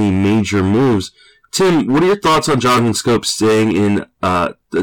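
Fuzz rides on every loud syllable for the whole speech clip: hard clipping, with the signal driven about 17 dB past its limit, flattening roughly a fifth of all samples.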